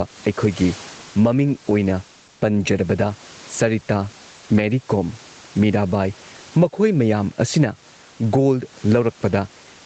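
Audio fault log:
Throughout – gain pumping: the level swings around 10 dB, and the speech sounds squashed. This is likely a fast limiter or compressor pulling down input gain set far too high.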